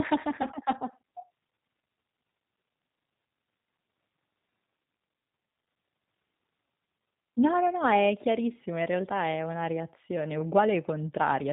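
From start to finish the speech carries plainly audible G.729 codec damage, consistent with an 8 kbit/s G.729A stream. The codec models the voice as a vocal tract filter driven by a pitch predictor and a sparse set of pulses in each 10 ms frame, so the sound is band-limited below 4 kHz, slightly rough and faintly synthetic.

At 0.42 to 0.47 s and again at 4.84 to 4.86 s there is VoIP packet loss concealed by the speech codec, each gap about 20 ms of missing audio, which points to a single lost packet. The decoder fills the hole by repeating its last pitch and filter settings at falling gain, so each spot is a brief stretched sound, a buzzy tone or coloured noise, that fades out. Because every frame builds on the one before, the voice stays weak or distorted for a moment after the packets return.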